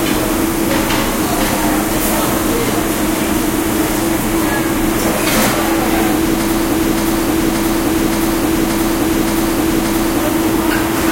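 At 6.71 s the audio snags into a broken-record loop: a 575 ms fragment plays six times back to back until 10.2 s, and whatever should have sounded there is simply gone. Most likely the player or stream stalled and kept resending its last chunk.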